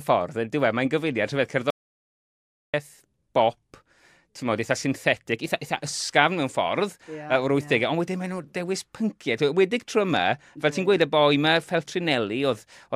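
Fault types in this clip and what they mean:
Audio dropout to silence: the speech stops abruptly at about 1.70 s and resumes at about 2.74 s, leaving roughly a second (1.03 s) of dead silence with no room tone or noise floor underneath. The likely cause is the input signal being lost, through a disconnection, a failed link or a mute, while recording carried on writing silence. On a waveform it shows as a flat line; on a spectrogram, a fully blank vertical band with hard edges.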